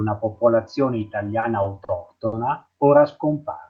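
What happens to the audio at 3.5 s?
Nothing goes wrong at 3.5 s; the speech carries on intact through that moment.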